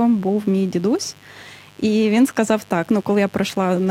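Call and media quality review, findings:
Mains buzz, whole clip, under the speech the entire time. Steady raspy buzz built on 50 Hz, harmonics reaching well into the kHz range, sitting about 30 dB below the speech. Probable culprit: dimmer, rectifier or a broken shield injecting sharp spikes twice per mains cycle. Check grounding and cabling first.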